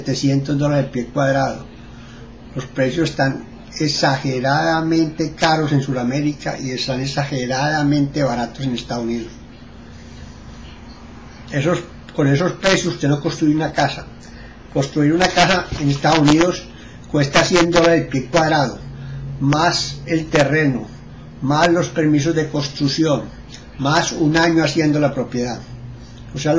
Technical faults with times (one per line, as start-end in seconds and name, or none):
none